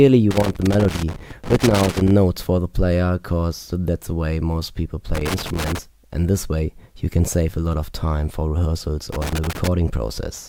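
Loose connector crackle breaks into the audio three times: from 0.31 to 2.11 s, from 5.15 to 5.79 s, and from 9.13 to 9.67 s. A worn or dirty contact is making and breaking as it shifts, chopping the signal into an irregular scratching burst. On the waveform each stretch shows ragged dropouts and sharp spikes where the contact jumps. The spectrogram shows scattered broadband vertical streaks across those same spans.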